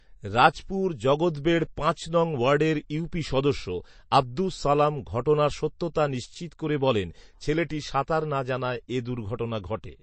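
Speech clip with MP3 compression damage plainly audible throughout: there's nothing above about 8.3 kHz, and the quieter detail swirls and warbles as weak bands drop in and out. That's likely a starved MP3 encoder, which fits a low bitrate around 32 kbps.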